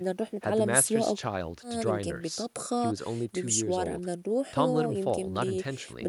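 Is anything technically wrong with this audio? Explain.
No, nothing is technically wrong with this audio.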